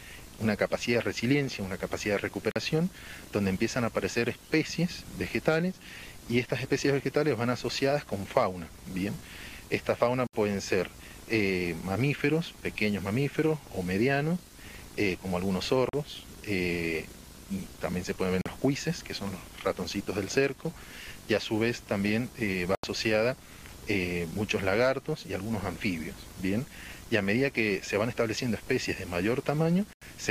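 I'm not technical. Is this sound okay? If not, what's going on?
No. The sound cuts out briefly at 2.51, 10.27, 15.89, 18.41, 22.75 and 29.93 seconds, each gap under a tenth of a second. This is likely a Bluetooth dropout. Bits of audio got lost on the wireless link, and playback skips ahead.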